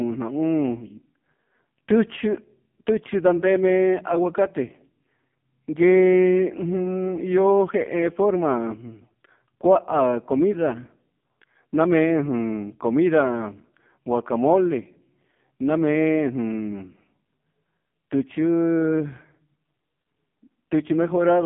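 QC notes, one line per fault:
Throughout: AMR narrowband mobile codec. The speech is band-limited to roughly 150 Hz to 3.5 kHz, with nothing above 3.5 kHz. Heavy buzzy, synthetic coloration comes from a pulse-excited vocal-tract model starved of bits, which fits a low AMR-NB mode near 5 kbps.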